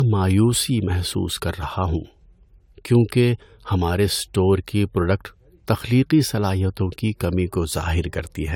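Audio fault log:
Throughout: generation loss. The speech has a swirly, hollow, smeared quality and soft attacks, more than the top end alone explains, with nothing above 19.9 kHz. That likely comes from about four rounds of lossy re-encoding, which fits AAC at around 96 kbit/s, with each pass stacking fresh noise and holes.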